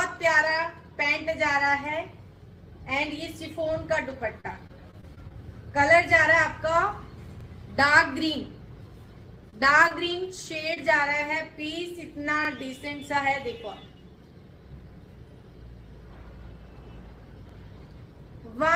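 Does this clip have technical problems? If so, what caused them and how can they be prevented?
Yes. Overlapping chunks at 2.36, 7.41, 12.45 and 17.49 s: each 5 s chunk starts 44 ms early, so that slice plays twice as a stutter. Prevent it by aligning chunk boundaries exactly, or crossfading overlaps instead of concatenating them.

Repeated packet loss (robotic sound) from 3.68 to 5.34 s: six closely spaced gaps, the longest 32 ms, are patched by extending the previous sound, which makes the audio choppy. Prevent it with a larger jitter buffer, forward error correction or a more stable network path.

Scattered short gaps from 9.50 to 10.78 s: about three isolated losses, the longest around 20 ms, are concealed, which leaves brief ticks and smears. Prevent them with modest jitter buffering and packet redundancy.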